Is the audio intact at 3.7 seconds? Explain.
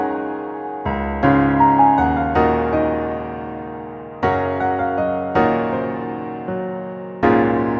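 Yes, at 3.7 seconds the audio is intact, with no dropout, click, distortion or other fault to be heard at that moment.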